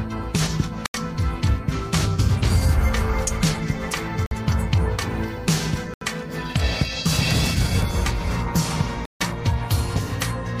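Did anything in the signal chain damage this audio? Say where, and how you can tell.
Yes. The damage was most likely at the wireless playback stage, as Bluetooth stalls: delayed packets let the headphone buffer run dry. The sound cuts to silence at 0.86–0.94 s, 4.26–4.31 s, 5.94–6.01 s and 9.06–9.21 s, gaps of 50 to 151 ms, then resumes.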